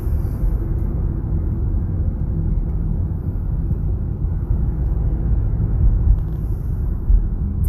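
No technical faults are audible anywhere in this recording.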